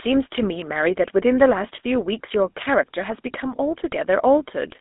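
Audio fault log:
Throughout: GSM full-rate codec. The speech has a plainly audible buzzy, gravelly roughness. The codec rebuilds the sound from a vocal-tract model driven by a coarse, regularly spaced pulse excitation, so fine detail in the source is replaced by a grainy texture. The audible band sits between 250 Hz and 3.6 kHz, with nothing above 3.8 kHz, giving a narrow, telephone-like sound that fits the 13 kbps full-rate scheme.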